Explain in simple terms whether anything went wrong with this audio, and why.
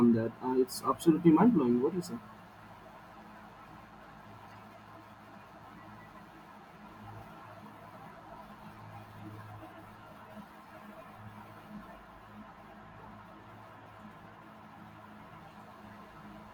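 Yes, there's a faint buzzy chatter, about 150 pulses a second, under the speech the whole way through. That's computer activity noise, with the computer's workload leaking into the audio through shared wiring.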